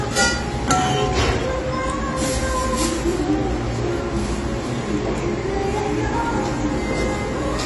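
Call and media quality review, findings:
AAC compression, throughout. Dull, smeared sound with a warbling, fizzy texture on sustained parts; nothing above 11.5 kHz. Likely AAC-LC encoder at a low bitrate, around 32 kbps, lowering the cut-off and coarsely quantising bands, leaving spectral holes.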